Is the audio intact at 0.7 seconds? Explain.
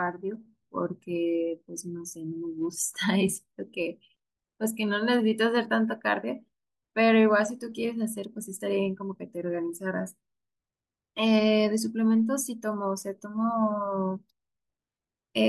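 Yes, at 0.7 seconds the speech runs cleanly with no dropout, click, distortion or other fault.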